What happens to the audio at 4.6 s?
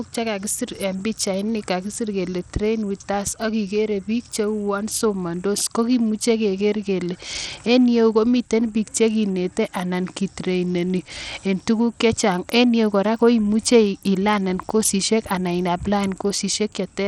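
At 4.6 s you're hearing damage that runs through the whole clip, likely from Bluetooth SBC compression. The upper sub-bands are starved of bits, so the speech has a gritty, coarse edge and nothing comes through above 17.7 kHz, which fits a bitrate of around 80 kbps.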